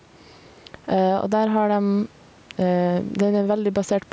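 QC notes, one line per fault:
throughout – gain pumping: the sound is squashed, with a gain swing of around 10 dB, likely from gain set far too high with a fast limiter. The waveform envelope looks flattened, and the spectrogram's noise floor brightens between phrases.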